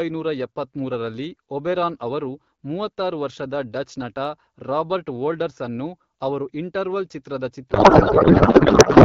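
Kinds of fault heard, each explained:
Codec payload misread: from 7.70 s to the end of the clip at 9.05 s, the speech gives way to garbled noise and warble that barely tracks it. The AMR frames arrive intact, but the receiver unpacks them with the wrong layout, here treating octet-aligned packing as bandwidth-efficient. Every field is therefore read from shifted bit positions and decoded into nonsense. Before the fault, the wideband AMR speech is clear, which fits a rate of about 12.65 kbit/s.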